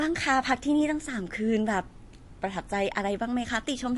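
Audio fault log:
throughout, MP3 compression: the speech has nothing above 11.3 kHz and a plainly audible watery, swirling texture, with metallic chirps on s sounds and smeared consonant attacks. This is likely MP3 encoding starved of bits, consistent with a bitrate near 48 kbps. The encoder removes all treble above a fixed cut-off and drops weak frequency lines, which flicker on and off between frames. A spectrogram shows a hard ceiling at 11.3 kHz and speckled, patchy energy below it.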